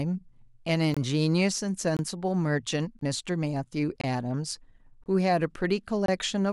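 Gap between chunks at 0.94–0.97, 1.97–1.99, 2.99–3.01, 4.01–4.04, 5.04–5.06 and 6.06–6.08 s in this speech: the audio arrives in 1.0 s chunks, and about 23 ms of silence sits at each join, cutting hard-edged holes into otherwise continuous sound.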